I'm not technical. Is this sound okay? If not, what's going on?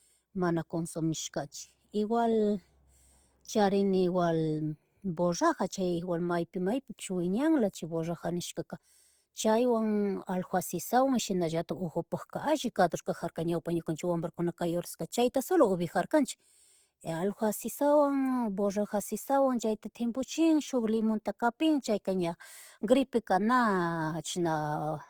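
No. The recording was likely squeezed hard with Opus compression, which saves space by replacing fine detail with borrowed or noisy fill. Across the whole clip, from start to end, the speech therefore sounds rough and grainy rather than clean.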